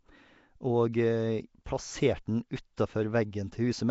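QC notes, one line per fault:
throughout, Nellymoser compression: the speech has a rough, hissy halo and a smeared, underwater quality, with nothing above 7.7 kHz. This is likely Nellymoser Asao coding, whose fixed bit budget starves weak bands and fills them with noise, consistent with a 32 kbps stream.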